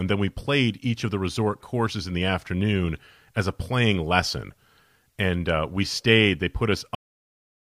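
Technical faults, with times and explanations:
6.95–7.75 s cut-off end: the final buffers were never written or played, so the speech stops mid-sound at 6.95 s and falls straight to digital silence with no decay.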